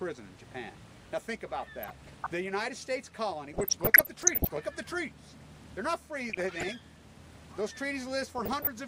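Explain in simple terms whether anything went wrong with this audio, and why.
Short blips of noise break through the sound from 1.82 to 2.27 s, 3.53 to 4.53 s, 6.30 to 6.85 s and 8.38 to 8.67 s. This is DAB burbling: weak digital radio reception let a small share of corrupted data through, briefly sending slices of the sound jumping in level.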